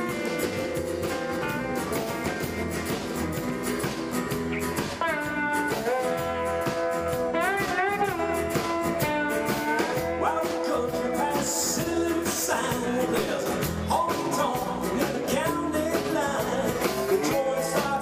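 Nothing stands out here: the audio carries on without any dropouts, glitches or other technical faults.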